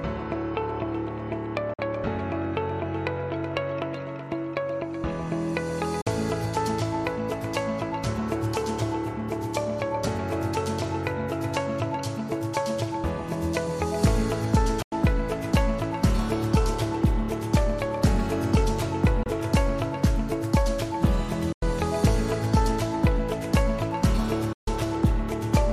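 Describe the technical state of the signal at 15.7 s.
At 15.7 s the signal is intact, with no technical fault audible at that moment.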